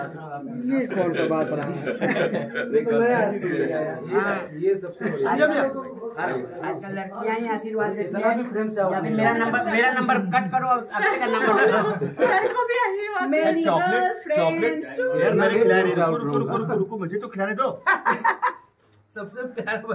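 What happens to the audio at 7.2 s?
At 7.2 s the audio plays through intact, with no dropout, click, distortion or other fault.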